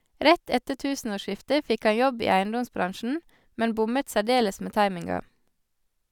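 A short speech recording, with no technical faults to report anywhere in it. Nothing heard calls for a time, a cause or a fix.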